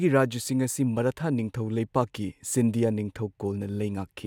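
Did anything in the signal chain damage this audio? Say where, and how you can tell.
No, nothing in this speech recording stood out as damage from any stage of the chain on listening.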